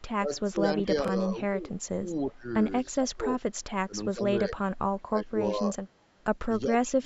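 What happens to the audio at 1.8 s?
At 1.8 s the speech is pulled down and partly chopped, falling by roughly 15 dB at its deepest. This sits inside a stretch from 0.17 to 2.47 s where the level repeatedly dips and the voice loses its high end. Around one and a half seconds of that span is affected. This is likely speech suppressed in double talk: with both sides talking at once, the echo canceller could not separate the near talker from the loudspeaker echo and attenuated both.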